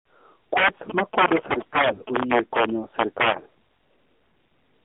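Speech, heard through a mobile phone line, with three distinct technical faults. The first is integer overflow, present throughout. The signal runs about 10 dB too hot, so the loudest peaks go past the largest value the integer format can hold. Instead of being held at the limit, they wrap around to the opposite sign and jump across the full range. A small fraction of samples, a few percent, are affected. Each one is heard as a violent crack on loud syllables, far harsher than ordinary clipping. The second fault is the AMR narrowband mobile codec, also present the whole way through. The audio sits in a telephone band of roughly 250 Hz to 3.5 kHz, and nothing above 4 kHz survives. The codec rebuilds the voice from a vocal tract model fed by sparse pulses. Here the damage is plainly audible: a buzzy, synthetic tone that points to a low bitrate, consistent with about 7.4 kbps. The third fault is AMR bit errors, in two bursts. 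The first runs from 1.34 to 2.00 s and the second from 3.28 to 3.46 s. Roughly a few percent of bits arrived flipped, and many frames in each burst are hit. The pulses driving the voice model land in the wrong places, and the finer pitch, gain and spectral values are off. Pitch and level hold roughly steady, but the voice turns hoarse, scratchy and gargly.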